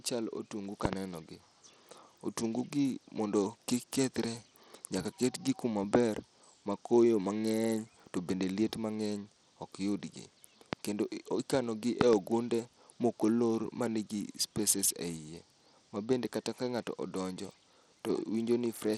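From the start and through the whole speech clip, the audio carries the sound of Bluetooth SBC compression, likely from a low bitpool setting around 80 kbps. The top sub-bands get few or no bits, so sibilants lose their treble and a gritty, grainy noise rides on the voice. On a spectrogram the upper range looks patchy, with bands above several kHz flickering on and off and blocky quantisation texture in place of smooth harmonics.

At 0.85 to 0.95 s a loud pop occurs as a pair of sharp clicks, peaking about 20 dB above the speech, then a single pop at 10.73 to 10.75 s at about 20 dB, and another double pop at 12.01 to 12.15 s, reaching about 25 dB. Each is likely a voltage step from a connector, switch or driver glitch. The waveform shows tall, narrow spikes towering over the speech envelope, and the spectrogram shows thin vertical broadband lines.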